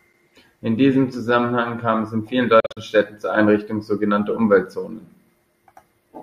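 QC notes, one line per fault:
2.60–2.77 s, Bluetooth dropout: audio packets likely failed to reach the headphones in time and were discarded, so the output fell silent in several short holes just after "kam es in vielen". About 122 ms of sound is missing, scattered over roughly 163 ms, with the longest single gap 41 ms, a pattern that fits around six lost packets. The speech picks up further along, as though it had kept playing through the gaps.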